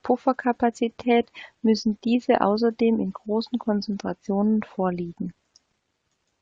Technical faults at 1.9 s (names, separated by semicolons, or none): none